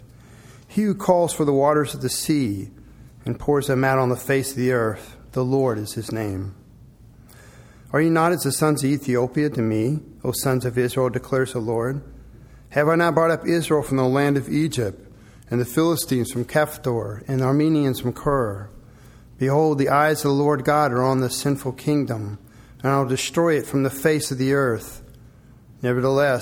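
At 6.29 s the sound suddenly sags flat by about a semitone (105 cents) and slows by 5.9 %, then snaps back to normal at 7.14 s. The same dip returns from 13.89 s to 16.30 s, held longer this time. Speed and pitch moving together in one abrupt step points to a drift correction step, likely from clock-matching software briefly lowering the playback rate to refill its buffer before restoring it.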